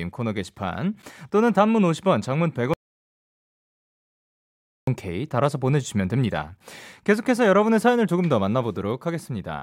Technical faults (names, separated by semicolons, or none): audio dropout to silence